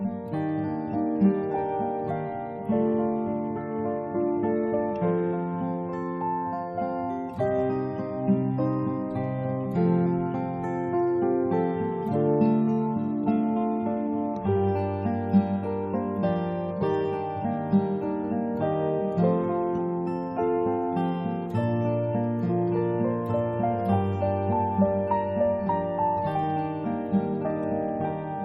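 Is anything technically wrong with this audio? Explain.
Yes, a Bluetooth SBC bit pool drop at 2.2–5.64 s, 13.31–14.64 s and 27.78 s to the end. Treble dulls and grit appears, which fits the bit pool falling to about 7, roughly 66 kbps.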